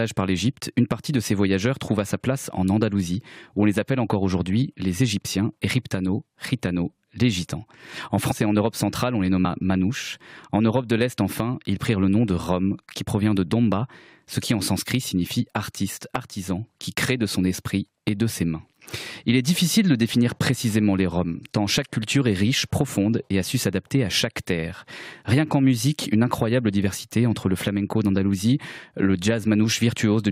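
The audio jumps forward at 8.30 s and again at 9.44 s. These are compressed frames skipped, dropping roughly 70 ms and then 50 ms of audio, which fits a few lost 23.2 ms frames.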